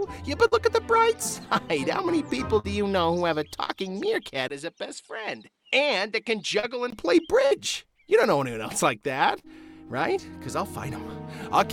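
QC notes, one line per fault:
0.47–0.55, 2.60–2.67, 6.59–6.66, 7.47–7.54 s: short concealed packet loss. About 40 ms missing each time; the receiver stretches the last sound over the hole, so you get a quick smear or wobble.
3.64–3.74 and 9.39–9.46 s: burst of packet loss. The concealment continues and fades the last sound into a held buzz or hiss. At 3.64 about 15 ms of audio is dropped outright.
4.48–6.92 s: input switched to a poorer device, likely. There's a 20 ms gap at the switch, then nothing above 11.4 kHz, a level roughly 5 dB lower and a new noise floor around 50 dB down.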